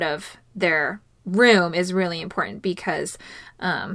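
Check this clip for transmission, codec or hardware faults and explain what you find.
Nothing audible in the speech points to a fault anywhere in the signal chain.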